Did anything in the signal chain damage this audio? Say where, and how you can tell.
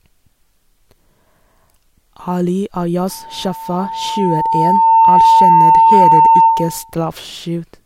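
Yes. There is loudspeaker feedback squeal in the analogue path, where a microphone hears the loudspeaker it drives. From 3.09 s a single tone at 901 Hz appears under the speech. It swells over roughly two seconds until it sits around 10 dB above the voice, and it holds until 6.94 s. At that one frequency the loop gain passed unity, so the tone fed itself and kept growing until the level stopped rising.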